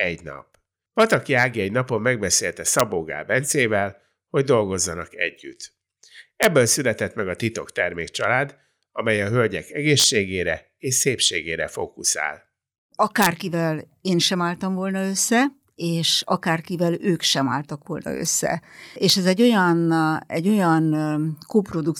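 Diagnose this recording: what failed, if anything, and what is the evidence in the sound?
Violent cracks at 2.80, 6.43–6.45, 10.00–10.04, 13.22–13.26 and 19.10 s mark integer overflow in sample-format conversion: loud speech peaks wrap to the opposite sign instead of limiting.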